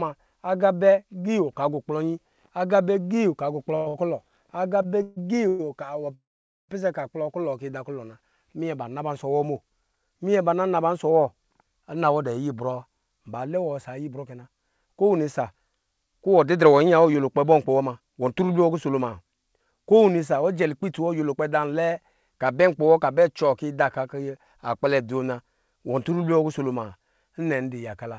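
Between 3.76 and 5.61 s the call shows repeated stalls (stutter). Packets kept reaching the receiver late, so its jitter buffer drained five separate times, and each time the last sound was stretched onward until fresh audio arrived. Those fills add up to 432 ms, about 23 percent of the stretch, with the longest lasting 140 ms. No audio is lost, but the passage drags and hiccups, with short smeared holds breaking its rhythm.

From 6.14 to 6.71 s there is a call audio freeze. The sound holds on its last moment for a brief continuation, then drops to silence for 470 ms, 547 ms in all, before resuming exactly where it stopped. The likely cause is packets held up in transit, emptying the jitter buffer so the receiver had to fill the wait itself. Since nothing is dropped, the gap pushes everything after it about half a second later.

From 11.94 to 21.96 s a jitter buffer speed-up is at work. 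The buffer had built up more audio than it aims to hold, so to bring the delay back down the receiver kept cutting out tiny slices, each a pitch period or a few long, in rapid succession. Roughly 0.7 s is removed this way. The speech plays at 108 percent speed with its pitch unchanged, and sounds noticeably hurried throughout that stretch. The call path's band limit is audible as nothing above 8 kHz.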